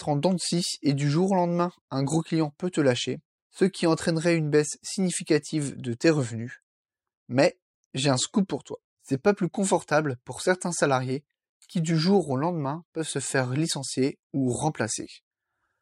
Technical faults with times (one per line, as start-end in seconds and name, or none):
none